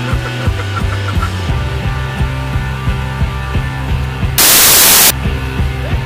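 From 4.38 to 5.10 s the samples are built from the wrong bytes: misaligned or swapped byte order turns low bits into loud, harsh broadband noise.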